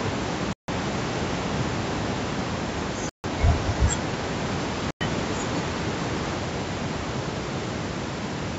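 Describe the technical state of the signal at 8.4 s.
At 8.4 s the speech is gone in an audio dropout to a faint residue, running from 6.40 s to the end. Only mains hum remains, about 35 dB down, likely from a still-live open input.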